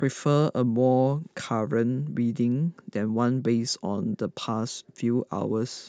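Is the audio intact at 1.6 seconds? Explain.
Yes, the speech at 1.6 seconds plays through intact, with no dropout, click, distortion or other fault at that point.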